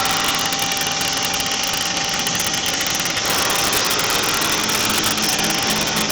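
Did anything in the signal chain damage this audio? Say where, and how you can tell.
Yes. Integer overflow damaged this audio in the sample-format conversion stage, throughout the clip. Loud peaks produce violent cracks, far harsher than clipping. The signal was driven about 7 dB too hot. A small fraction of samples, roughly half a percent, wrapped to the opposite extreme instead of being limited.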